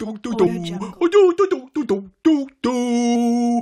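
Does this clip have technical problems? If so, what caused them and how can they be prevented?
Yes. Two brief glitches from damaged data in a compressed stream occur at 0.46 s and 3.15 s, each heard as a short chirp or blip. At those points part of the compressed data was lost, zeroed or overwritten, so the decoder could not read the affected frames correctly, lost sync and searched for the next valid frame header. Prevention: carry the stream over a reliable transport with checksums or error correction, and verify file integrity before decoding.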